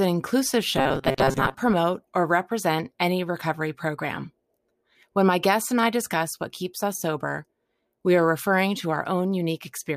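A speech clip in which new audio likely arrived too seldom, so the software repeated its last short buffer, about 7.5 ms long, and skipped real audio, with roughly half the material repeated. From 0.77 to 1.54 s, just before "promote or represent any", this robotic sound from repeated short buffers imposes a rigid, metallic buzz at 134 Hz.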